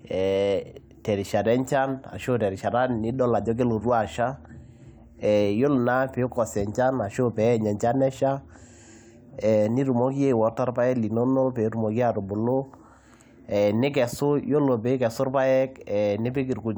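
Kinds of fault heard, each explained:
No faults detected on this speech clip; nothing to report.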